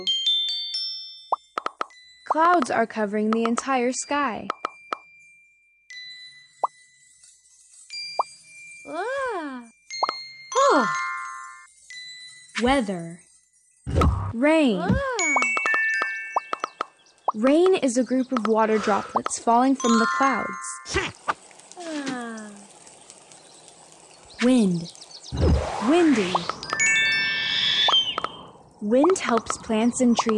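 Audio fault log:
No faults found in this clip.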